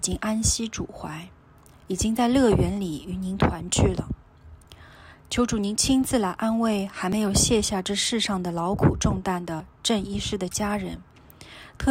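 At 2.17, 4.65, 7.13 and 9.60 s the audio jumps ahead, losing about 20 ms each time with no gap. The steady 2.5 s spacing points to audio missing between chunks, likely at each chunk boundary. Each shows as an abrupt waveform splice and a thin vertical spectrogram seam.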